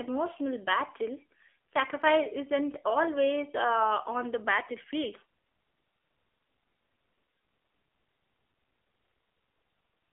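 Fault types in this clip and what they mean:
AMR narrowband mobile codec: The whole clip has gone through a 2G/3G-style phone speech coder, so you get that boxed-in mobile call sound, with nothing much under about 300 Hz or over 3.5 kHz. The coding damage is plainly audible: the speech comes out buzzy and a bit synthetic, as the codec rebuilds it from a vocal-tract model and a few pulses. That fits one of the lower-bitrate modes, around 7.4 kbps.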